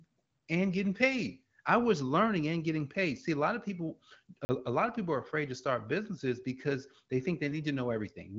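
At 4.45 s the speech drops into a block of digital silence lasting 40 ms, returning at 4.49 s. A run of samples has been replaced by zeros, most likely because the output buffer was not filled in time. The signal cuts out and resumes with no fade, and at this length the event is heard as a brief hole. The AMR wideband coding underneath leaves the band empty above about 7.5 kHz.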